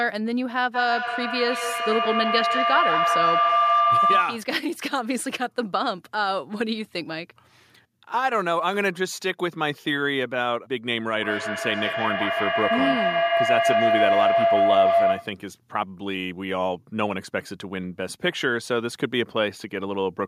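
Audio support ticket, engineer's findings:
Feedback howl, 0.74–4.57 s and 11.14–15.48 s. Tone near 1 kHz, then near 700 Hz, peaking about 4 and 5 dB over speech, pulsing roughly every 150 ms. Probable cause: second device in same room; mic-speaker loop gain above unity.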